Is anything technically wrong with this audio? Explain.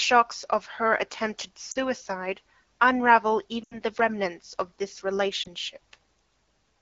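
Yes. There are lost AMR speech frames at 1.71–1.78 s (just after "of her attempted"), 3.63–3.80 s (just before "the remnants") and 5.43–5.48 s. The decoder patches each gap by repeating the last good pitch and vocal tract settings with falling gain. The shortest gap is a brief dip. The 80 ms gap drops the sound to near silence within two frames. On a spectrogram, the harmonics flatten into a smeared, dimming band. The waveform shows a shrinking envelope before the speech resumes. The AMR wideband (HD Voice) codec carrying the speech sounds clear, as expected at 12.65 kbit/s.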